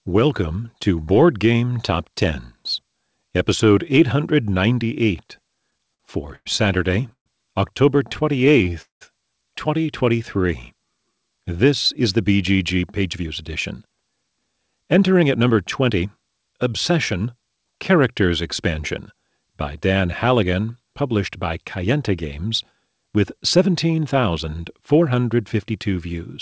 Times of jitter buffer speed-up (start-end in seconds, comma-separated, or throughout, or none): 12.82-17.80